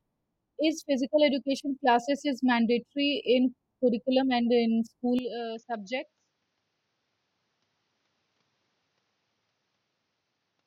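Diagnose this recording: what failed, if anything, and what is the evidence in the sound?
At 5.19 s the speech abruptly turns duller and quieter, and stays that way to the end: nothing reaches above 6.9 kHz, the level falls by roughly 10 dB, and a new background hiss appears roughly 45 dB below the speech. There is no gap at the change. This is likely an input switched to a poorer device, at the capture driver stage. A codec's bandwidth drop would narrow the band too, but it would not bring a new noise floor and a level step at the same instant.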